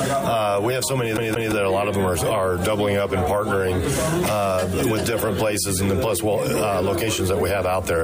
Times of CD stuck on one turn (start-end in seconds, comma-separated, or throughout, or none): 1.17-1.52